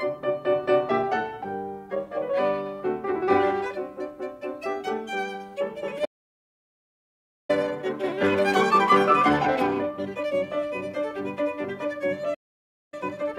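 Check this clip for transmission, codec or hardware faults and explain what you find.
Two faults recur in this music clip, each time as a pair. The sound halts, then comes back hurried.

Playback stall, at 6.04 to 7.50 s (about 1.44 s) and 12.34 to 12.94 s (about 0.58 s): the music cuts to silence mid-phrase, most likely because the player's buffer ran dry or its thread was blocked. Unlike a dropout of a few milliseconds, each gap is long and clearly audible.

Time-compressed catch-up, at 7.50 to 10.50 s and from 12.94 s to the end: after each stall the player works through its backlog at 1.25 times normal speed by splicing out short pieces and cross-fading the joins. Tempo rises while pitch stays put, which separates it from a sample-rate mismatch, where pitch would rise too.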